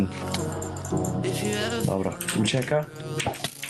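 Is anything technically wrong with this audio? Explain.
Yes. Gain pumping runs through the whole clip. The gain swings by around 20 dB, so loud and soft parts sit unnaturally close and the sound feels squashed. The likely cause is input gain set far too high, with a fast limiter or compressor clamping each peak and releasing in the pauses. A noise gate would do the opposite, pulling the gaps down toward silence instead of letting the background swell.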